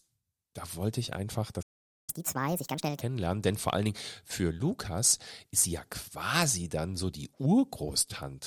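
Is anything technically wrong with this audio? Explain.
Yes, there are two related playback faults in this speech clip.

At 1.62 s, right after "da wollte ich einfach", a playback stall cuts the sound off mid-flow for about 0.46 s, until 2.10 s. The player was likely starved of data or had its output thread blocked, so nothing reached the output. On a waveform this shows as a flat line that interrupts the speech envelope. On a spectrogram it is a blank vertical band across all frequencies.

From 2.10 s to 3.01 s, just before "denn vor allen", there is catch-up at higher speed. To recover the lost time, the player resamples its backlog and runs it at 1.5 times normal speed, which also raises the pitch by roughly seven semitones. The speech sounds hurried and chipmunk-like before snapping back to normal. A spectrogram shows the harmonics shifted upward and squeezed closer together in time. 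The waveform's syllable bursts are visibly compressed until 3.01 s.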